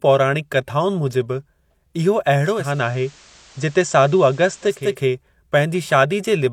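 From 2.41 s to 5.00 s, digital radio blends to analogue FM. Hiss rises, about 30 dB down. Level holds steady.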